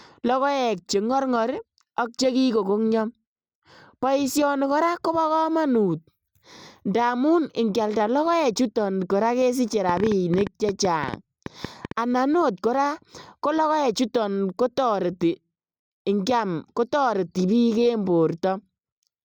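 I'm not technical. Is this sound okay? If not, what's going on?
No. From 9.89 to 11.92 s, right after "ikialda logoechuton koraa kesiche", there's a train of clicks: about twenty sharp, similar ticks at roughly nine per second, unevenly spaced and loud over the speech. It's likely interference from nearby equipment or a faulty connection or power supply.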